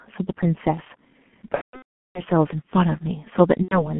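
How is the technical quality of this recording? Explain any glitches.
Pretty rough, honestly. The G.723.1 codec runs throughout: the band stops around 3.4 kHz, and the sound fits a low rate near 6.3 kbit/s, so the speech comes out muffled, hoarse and smeared on consonants. Then there's VoIP packet loss concealed by the speech codec, from 1.55 to 2.23 s and again from 3.62 to 3.94 s. The decoder keeps guessing from its last pitch and filter while fading the gain. In the first stretch, about 570 ms of the 600 ms is missing, with one 390 ms gap, so the voice stretches into a buzzy tone or coloured noise that fades and then mutes, and stays weak afterwards.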